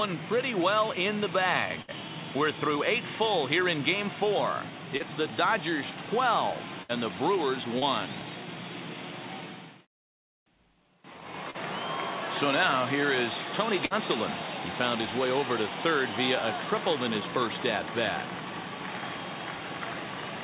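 At 1.82 to 1.91 s, 6.83 to 6.92 s and 13.85 to 13.93 s, a burst of packet loss drops about 60 ms each time. The receiver stretches the last sound into a fading buzz or hiss, and the audio then skips ahead. Shorter concealed packet loss at 4.97, 7.79 and 11.51 s covers only about 30 ms, heard as a brief smear or wobble. Throughout, the band-limited sound, with nothing above 4 kHz, fits a G.711 mu-law call path.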